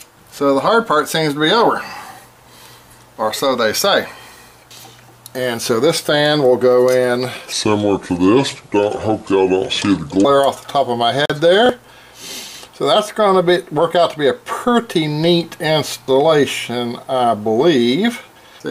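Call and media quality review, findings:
Section at the wrong speed, 7.52 to 10.25 s: playback at 0.737x, pitch about five semitones down, sound deep and drawn out. Likely a resampling or clock mismatch in the editor or player, shifting speed and pitch together.

Bluetooth dropout, 11.26 to 11.30 s: 40.6 ms gap of silence, which fits two lost packets. Likely wireless link to headphones failing to deliver in time. Sound resumes further along, as though playback had continued through the hole.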